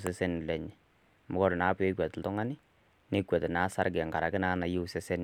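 No audible technical faults.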